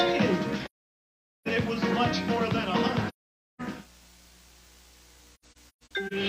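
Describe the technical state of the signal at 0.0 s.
The signal is intact at 0.0 s, with no audible fault at that moment.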